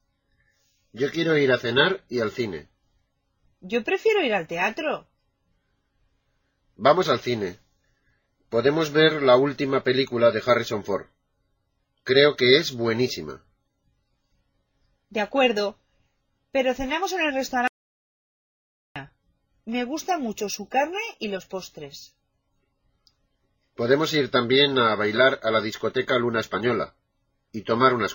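At 17.68 s the sound cuts off abruptly and stays in complete silence until 18.96 s, when it resumes mid-flow: an audio dropout to silence lasting about 1.28 s. The input was likely lost for that stretch while recording carried on writing silence, so whatever occurred in the gap is missing. No room tone survives. The waveform shows a flat line, and the spectrogram shows a fully black vertical band.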